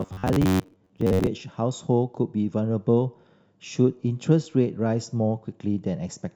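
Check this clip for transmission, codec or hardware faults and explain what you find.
One fault turns up in the opening of this speech clip. Robotic sound from repeated short buffers, 0.01 to 1.27 s: a rigid, metallic buzz near 94 Hz, likely from audio arriving too seldom, so roughly half the time is filled by looping a buffer of about 11 ms.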